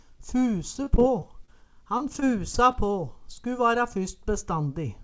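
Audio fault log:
0.84–1.49 s, repeated packet loss (robotic sound): short dropouts recur, the longest about 24 ms, each patched by stretching the previous sound. The result is choppy. A waveform shows repeated, near-identical short cycles, and a spectrogram shows smeared, flattened frames, all capped at 8 kHz by the call codec.
1.97–2.75 s, repeated packet loss (robotic sound): a second run of brief holes, the longest about 22 ms, again filled by extending the last sound, so it turns choppy with pieces missing. The waveform shows copied cycle patterns, and the spectrogram shows repeated vertical slices breaking up the normal texture.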